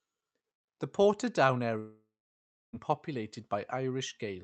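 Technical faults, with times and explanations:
1.79–2.75 s, long network dropout: the speech breaks off and its last sound is drawn out into a fading buzz, then about 0.63 s of near silence follows before the audio resumes with part missing, likely because packets stopped arriving and the receiver concealed the gap.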